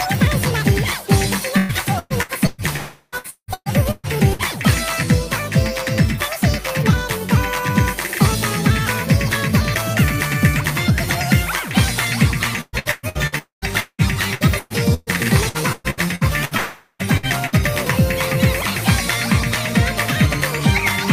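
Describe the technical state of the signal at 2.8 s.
At 2.8 s the stream is in the middle of repeated packet loss (robotic sound), running from about 1.57 s to 4.42 s. Over that stretch packets keep failing to arrive in time, leaving ten gaps, the longest about 179 ms. The receiver patches each hole by extending the last good sound, and about a third of the span ends up concealed. The result is choppy, robotic-sounding audio with pieces missing.

The moment itself falls inside a longer break, from 2.76 s to 3.15 s, most likely a long network dropout in which nothing reached the receiver for about 0.36 s. The concealment stretches the last fragment into a fading buzz or hiss across nearly all of that gap, with only a brief touch of silence, before sound resumes at 3.15 s without the lost portion.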